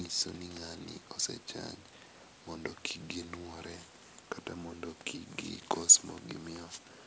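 Nothing stood out on listening to this speech, which is carried in a call-style band that tops out around 8 kHz.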